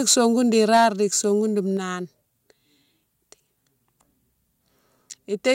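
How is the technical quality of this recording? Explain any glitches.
The recording has two related problems: the loudest speech near the start distorts, and the level then drops twice in quick steps.

Microphone overload appears from 0.09 to 0.26 s and again from 0.58 to 0.85 s, ending just before "di sogoune". The input gain was likely set too high, so peaks ran about 6 dB and then about 3 dB past the converter's ceiling. A few percent of samples have their tops flattened, which gives those loud syllables a harsh, crackling edge.

The microphone volume is stepped down at 0.77 s, by about 2 dB, and again at 1.77 s, by about 4 dB. This was likely the call software reacting to the clipping and cutting the device's input level in single jumps rather than gradually. Both the voice and the background drop suddenly at each point. The first drop falls inside the second distorted stretch, just before "di sogoune", and the speech after 1.77 s sits about 4 dB quieter.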